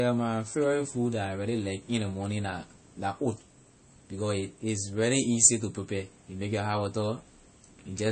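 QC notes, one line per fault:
Throughout, MP3 compression: the speech has nothing above about 8.3 kHz, and the coding damage is plainly audible, likely from an MP3 encoder starved of bits, consistent with a rate around 32 kbps. With so little to spend, the encoder drops the whole upper band at a fixed cut-off and discards quieter frequency detail it judges inaudible. What remains sounds dull and audibly processed rather than clean.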